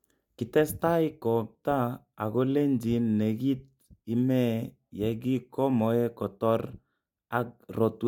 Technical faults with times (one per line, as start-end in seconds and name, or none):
none